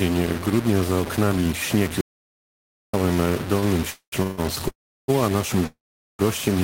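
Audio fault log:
Throughout: low bit depth without dither. Likely 4-bit truncation; quiet speech turns gritty, error tracking the signal, noise only about 10 dB down; waveform shows coarse stair-steps.
2.01–2.94 s: audio dropout to silence. After "grudnia za oknami śnieg", about 0.92 s of speech vanishes into silence, likely lost input; flat waveform line, blank spectrogram.
3.59 s: short stall from a late packet. A sound is held 30 ms too long while the buffer waits, nothing lost; slightly smeared, repeated spectral frames.
3.90–4.14, 4.22–4.40, 4.68–5.10, 5.66–6.21 s: call audio freeze. Likely empty jitter buffer; the last sound buzzes and fades, in three of them into silence (up to 0.43 s), resuming twice before "a naszym"; fading smear then gap.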